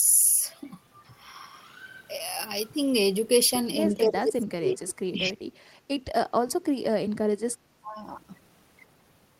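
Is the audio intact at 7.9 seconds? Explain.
No. From 7.82 to 7.95 s the speech dips by about 15 dB. This is speech suppressed in double talk, likely an echo canceller turning down its own talker along with the loudspeaker echo while both sides spoke at once.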